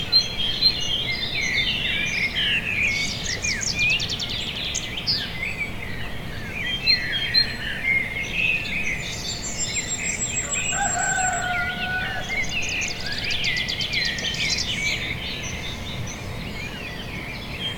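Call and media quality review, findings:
No transport, device or processing faults heard in the audio; signal level, timing and continuity hold steady throughout, no action required.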